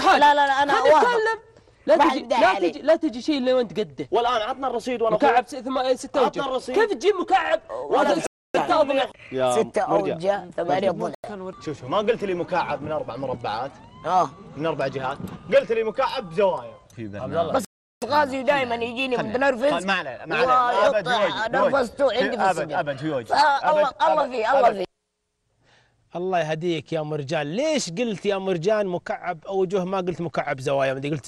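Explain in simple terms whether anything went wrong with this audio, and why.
Blocks of digital silence at 8.27 to 8.55 s, 11.15 to 11.24 s and 17.65 to 18.02 s: the sound drops abruptly to total silence. The playback program likely failed to fill its output buffer in time, and the shortest hole fits one 4,096-sample buffer.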